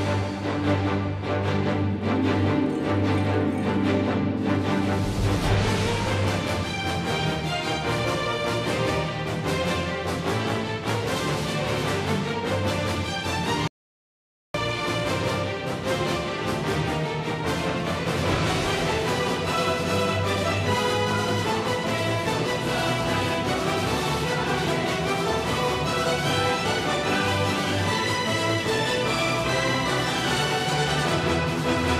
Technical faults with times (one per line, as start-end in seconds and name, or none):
13.68-14.54 audio dropout to silence